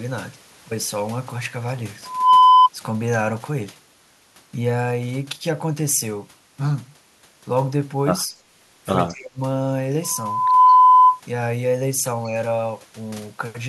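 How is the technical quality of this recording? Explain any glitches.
The recording has two brief call-processing glitches close together in its later part.

From 9.09 to 9.4 s, the speech is suppressed in double talk: the level sinks by around 25 dB for roughly a third of a second, likely because the echo canceller mistook overlapping talk for echo. Unlike a network dropout, the sound is turned down by the canceller rather than lost in transmission.

From 10.67 to 10.77 s there is an echo leak: a faint copy of the speech, about 30 dB below it, returns 188 ms late, likely because loudspeaker sound escaped echo cancellation. Its distinct delay separates it from room reverberation, which smears without a discrete repeat.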